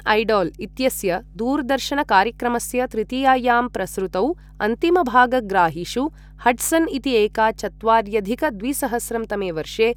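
From the first moment to the last, there's mains hum sitting under the speech, a steady low drone at 50 Hz. Something, probably a ground loop or a transformer parked too close to the cabling, is letting the power line leak into the signal path. The hum sits roughly 25 dB below the speech, a constant buzz-tinged tone that never shifts in pitch or level.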